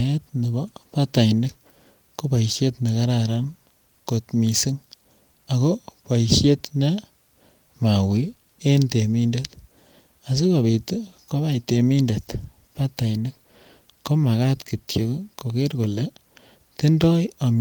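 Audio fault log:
No faults heard anywhere in this recording.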